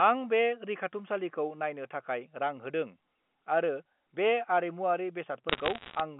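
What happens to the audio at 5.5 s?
From 5.49 s to 6.0 s the sound picks up bit errors on a digital phone line. Scattered flipped bits in the G.711 A-law stream, under one percent of bits, each corrupt a single sample. Where a sign or high-order bit is hit, that sample jumps and gives a sharp, isolated tick, so the half-second sounds crackly. Unlike packet loss, nothing drops out or repeats. The speech continues unbroken, with clicks laid over it.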